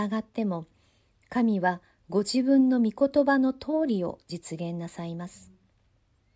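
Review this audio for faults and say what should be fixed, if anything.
Nothing in this speech recording needs fixing. No audible fault turns up at any point in it.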